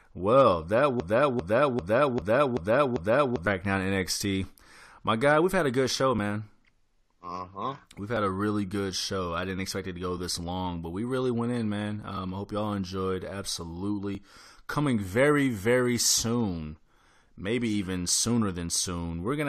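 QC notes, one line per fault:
1.00–3.47 s, broken-record loop: the player, encoder or stream most likely stalled and kept resending its last buffered fragment, so a 395 ms stretch of speech plays six times back to back, and the speech that belonged there is lost.
2.22, 4.21, 6.19, 8.17, 12.17, 14.15, 16.13 s, overlap between stream segments: segment time stamps overlap on roughly 2 s boundaries, so the player trims 6 to 16 ms of real audio. The waveform jumps, heard as a tiny skip just after "had a good show", just before "a really good show", and between "really went in man" and "I hope y'all enjoyed".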